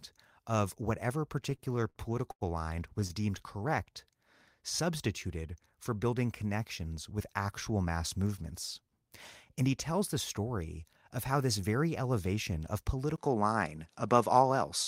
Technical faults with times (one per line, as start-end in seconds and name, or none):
1.43-2.43 repeated stalls (stutter)
3.57-3.93 jitter buffer slow-down
13.16-14.87 input switched to a poorer device